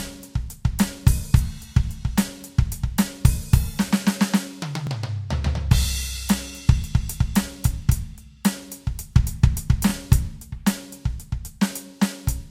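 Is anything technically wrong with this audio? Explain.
Yes. Overlapping chunks at 4.87–4.89 s and 9.89–9.92 s: the music was handled in 5-second chunks, each starting 25 ms before the previous one ended, so that sliver plays twice at every join. The result is a brief stutter or click every five seconds.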